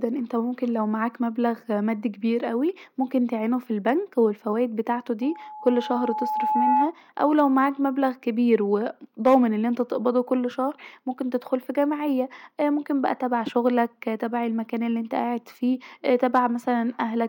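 Loudspeaker feedback squeal starts at 5.21 s in this speech recording, right after "وممكن بالفوايد بتاعته", and runs to 6.94 s. A steady 855 Hz tone swells over roughly a second and a half until it sits a few decibels above the speech. The microphone is hearing the loudspeaker it drives, and at 855 Hz the loop gain tops unity, so the tone keeps feeding itself until the loop is broken. Hard clipping follows in three short bursts, at 7.23 to 7.65 s, at 9.26 to 9.36 s just before "أن انت تقبضه كل", and at 16.24 to 16.39 s just after "الي انت قاعد فيه". In each, the waveform peaks go past what a stage can pass, by about 1 to 3 dB, and get shaved flat. That adds a brief harsh crackle of high harmonics on the loudest moments.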